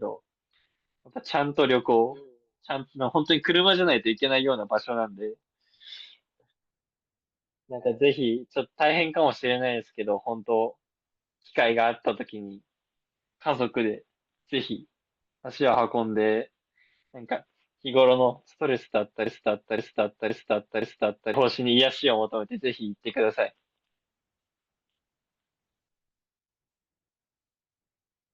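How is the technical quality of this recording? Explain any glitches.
The recording has two audible glitches, both in the second half.

At 15.74 s there are lost LE Audio frames. The gap fits a single missing 10 ms frame. The LC3 decoder filled it by reusing the previous spectrum with random signs. The result is a brief noisy smear in the speech.

From 19.26 s to 21.34 s there is a broken-record loop. A fragment of about 0.52 s plays four times, back to back. The likely cause is a stalled player or stream resending its last buffer. The speech that belonged there is gone.

Light lossy compression is present but faint.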